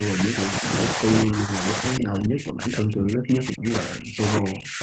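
From 0 to 0.7 s the speech falls by about 30 dB, then from 0.94 s to the end it sinks by up to about 40 dB. This is likely speech suppressed in double talk, with the echo canceller ducking the near talker during far-end speech.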